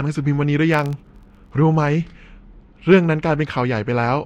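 From 0.72 to 1.54 s a low buzz at 43.1 Hz rides under the speech, rising and falling with its level. This is a filter restarted on every block: it loses its state and starts each block from silence, leaving a small tick each time, which fits a 1024-sample block.

At 2.92 to 2.97 s there is a short burst of harsh crackle. This is hard clipping: the signal ran about 4 dB past what the stage could carry, so its peaks were cut flat, and those flat tops added harmonics high in the spectrum.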